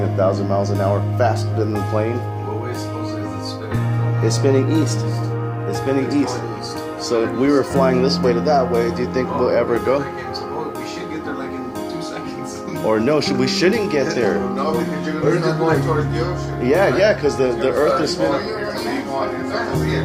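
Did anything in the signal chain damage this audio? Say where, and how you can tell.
No, nothing in the chain audibly damaged this audio, and no stage leaves a mark worth tracing.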